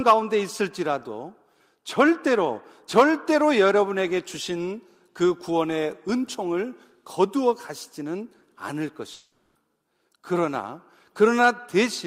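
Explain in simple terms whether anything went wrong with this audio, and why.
Between 9.13 and 9.57 s the speech gives way to a fading buzz, likely a long network dropout. The receiver stretches the last sound to cover the gap, and what was said there is lost. A brief glitch would only click; this swallows a whole piece.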